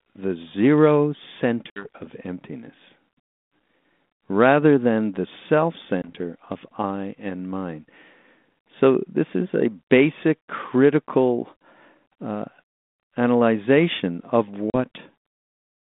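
Speech over what sounds like a 32 kbit/s G.726 ADPCM line, with packet loss on the ADPCM call: hard silent gaps at 1.7 s (60 ms), 6.02 s (20 ms) and 14.7 s (40 ms). Each time the decoder's predictor and step size lose sync, so the sound returns with some distortion before settling.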